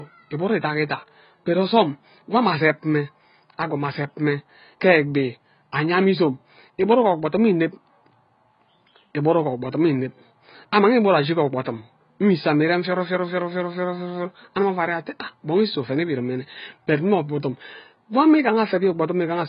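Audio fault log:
Throughout, AAC compression: the speech is dull, with nothing above 5.1 kHz, and heavily smeared, with warbling, fizzy sibilants. The likely cause is a low-bitrate AAC-LC encode, consistent with roughly 16 kbps, where the encoder drops the top band and quantises the rest coarsely.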